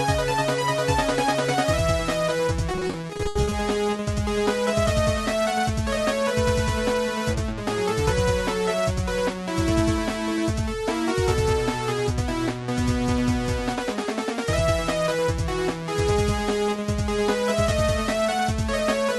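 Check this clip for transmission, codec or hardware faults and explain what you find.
One transmission fault stands out: a burst of repeated packet loss (robotic sound) from 2.71 to 3.53 s. Over those 0.8 s, packets kept arriving lost or late in quick succession, with more than a dozen short holes. Each was patched by extending the preceding sound, about 340 ms in all, roughly 41% of the stretch, with the longest hole at 80 ms. The result is choppy, with fragments missing. The surrounding audio carries the Opus call path's 12 kHz bandwidth limit.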